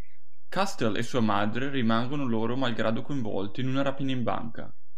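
Speech, carrying a DC offset of about -26 dBFS for its full length: the waveform sits displaced from zero, wasting headroom and placing constant energy at 0 Hz.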